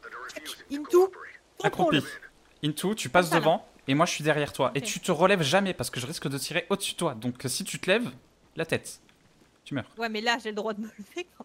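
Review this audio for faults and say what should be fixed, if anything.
Nothing stood out on listening, so there is nothing here that calls for a fix.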